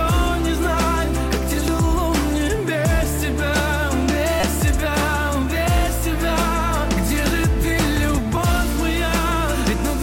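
Three short glitches from damaged data in a compressed stream break up this audio: a tiny glitch at 1.68 s, a longer one from 4.40 to 4.44 s, and another quick glitch at 8.37 s. Each time, a stretch of the encoded data is corrupted, so the decoder misreads those frames, loses its place, and has to hunt for the next valid frame header before it can continue, which produces those brief artefacts.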